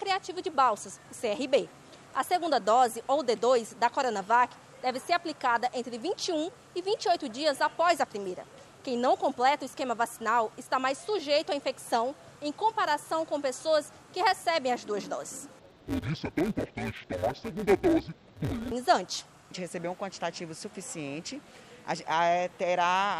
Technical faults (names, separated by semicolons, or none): interleaved audio read as planar